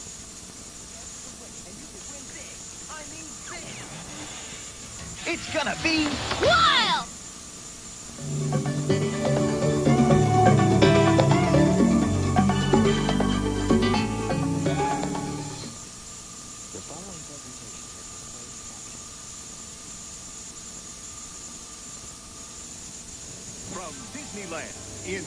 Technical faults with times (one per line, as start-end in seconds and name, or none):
none